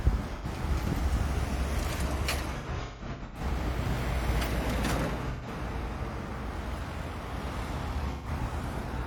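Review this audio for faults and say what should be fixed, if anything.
AAC frame loss with concealment occurs at 0.35–0.46 s, 2.57–3.40 s, 5.30–5.47 s and 8.11–8.28 s. Lost frames are rebuilt from the last good spectrum, giving smeared, noisy patches. The 2.57 s stretch has scattered gaps, the longest roughly 150 ms. Adding forward error correction or retransmission would prevent these losses.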